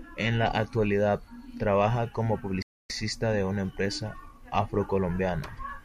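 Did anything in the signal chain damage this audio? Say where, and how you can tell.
Yes. At 2.62 s the speech drops abruptly into silence and stays there until 2.90 s, then picks up exactly where it left off, with nothing skipped or repeated. That seamless resumption marks a rebuffering stall at the playback stage. The player's buffer of downloaded audio ran dry, so it halted output and waited for more data before continuing. No audio is lost, but the gap adds about 275 ms to the clip's running time.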